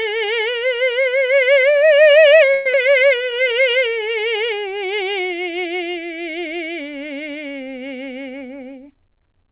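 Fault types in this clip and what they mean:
call audio freeze: Packets likely stalled in transit and the jitter buffer ran dry, so the music is stretched with a fading buzz or hiss for about 116 ms from 2.54 s, then resumes where it stopped with nothing lost, only a pause added.
skip ahead: Audio was discarded while later packets were already queued, so at about 2.73 s playback jumps forward, losing roughly 70 ms of music. The two edges are joined almost directly with only a tiny filler.
jitter buffer slow-down: With the buffer running low, the receiver repeated short pitch-period pieces to build a reserve, adding 56 ms between 3.18 and 3.55 s. The music plays at about 87% speed at unchanged pitch, drawn out.
jitter buffer speed-up: Holding more audio than its target, the receiver cut short pitch-period pieces, removing roughly 100 ms from 8.33 s to the end. The music runs at about 108% speed at the same pitch and loses its steady tempo.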